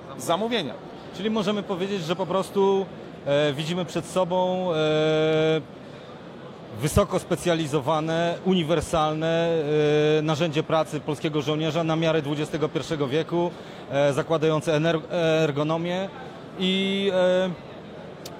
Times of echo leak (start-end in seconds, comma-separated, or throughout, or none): none